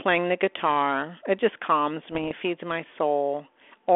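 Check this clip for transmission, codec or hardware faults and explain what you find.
One fault is present: bit errors on an ADPCM link, from 2.12 to 2.32 s, between "just calms" and "feeds my", on speech carried over a telephone band of roughly 300 Hz to 3.4 kHz. Flipped bits at an error rate of a fraction of a percent knock the decoder's step size and predictor off track, so each error rings for milliseconds as pops and rough bursts with brief level jumps. A waveform shows spiky excursions, and a spectrogram shows short vertical broadband smears.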